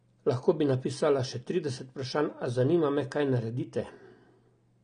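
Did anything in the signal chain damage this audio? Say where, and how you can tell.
Yes, at the codec stage: the speech is dull throughout, nothing above 10 kHz, with smeary, warbling sibilants. That's likely AAC compression, and the damage fits something around 32 kbps AAC-LC.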